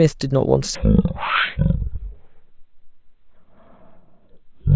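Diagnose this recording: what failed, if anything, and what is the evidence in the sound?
From 0.75 s right through to the end, the speech drops into a slow, deep drag. That's a wrong sample rate fault at the playback stage. Everything runs at about 0.36 times normal speed and sits about 17.6 semitones low, nearly an octave and a half down. Speed and pitch shift together by the same ratio, which fits 44.1 kHz material being clocked out at 16 kHz with no conversion in between.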